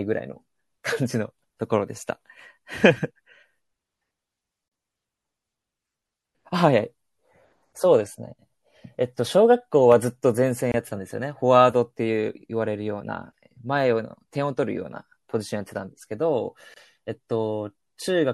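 Throughout the speech a watery, swirly quality and dulled treble are plainly audible, likely from MP3 compression at a low bitrate, which fits about 64 kbps. At 4.68 s, 10.72 s and 16.74 s, six seconds apart, brief silences of 34 ms, 24 ms and 24 ms cut the sound before it resumes. These are gaps at joins of encoded pieces, where each piece kept its encoder delay and end padding.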